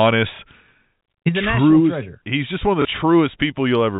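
A packet went missing at 0.36 to 0.39 s and again at 2.82 to 2.85 s, just after "just one of the". Each time the receiver filled the gap with packet loss with last packet repeated. Each 30 ms gap fits one lost 30 ms packet. The repeated chunk is heard as a small blip, over the narrow telephone band of the G.711 link.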